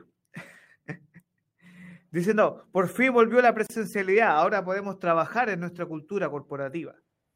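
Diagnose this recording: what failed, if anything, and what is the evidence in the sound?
A gap at a join of encoded pieces opens at 3.67 s and runs to 3.70 s, about 32 ms of silence dropped into continuous speech just after "por fin volvió la". The stage is the codec. The sound stops at a smeared edge, then resumes exactly where it left off with nothing missing. Two separately encoded segments were butted together untrimmed, leaving the first segment's final-frame padding and the second's encoder start-up delay in place as dead air.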